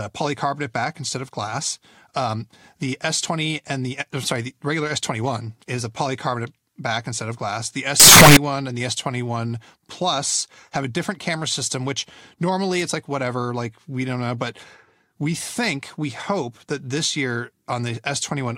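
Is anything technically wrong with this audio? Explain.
Yes. From 8.00 to 8.37 s the speech abruptly turns into a very loud, harsh, buzzy burst. The waveform is squared off at an almost fixed, high level, and background noise jumps to the same level as the speech. This is likely a float read as integer fault: 32-bit float samples interpreted as 32-bit integers, so each sample's sign and exponent bits, not its true amplitude, set the output level.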